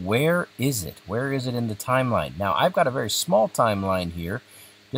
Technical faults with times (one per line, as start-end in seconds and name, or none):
none